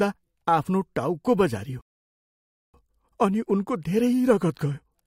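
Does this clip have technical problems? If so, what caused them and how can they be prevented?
Yes. A rebuffering stall runs from 1.81 to 2.74 s. Playback exhausted the downloaded audio, fell silent, then resumed exactly where it stopped, adding 0.93 s. The waveform shows a flat line, the spectrogram a blank vertical gap. A larger playback buffer or adaptive bitrate prevents it.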